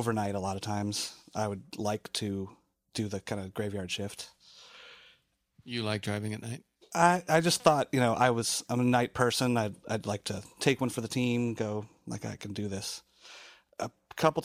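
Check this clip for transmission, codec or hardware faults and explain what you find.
No faults heard anywhere in the speech; nothing to report.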